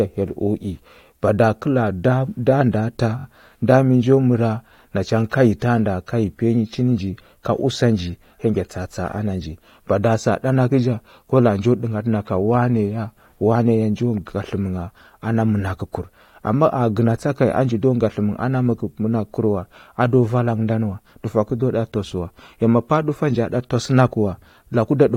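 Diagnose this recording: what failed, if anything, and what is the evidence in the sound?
Repeated frames at 3.18 to 3.24 s, between "ndəa tah" and "nda mi": a 21.3 ms codec block replays three extra times as a stutter, adding 64 ms.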